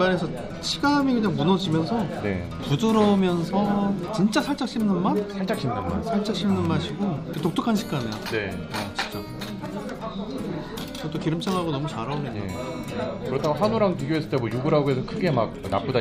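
No technical faults can be heard anywhere in this clip. There is nothing here that needs a time, a value or an explanation.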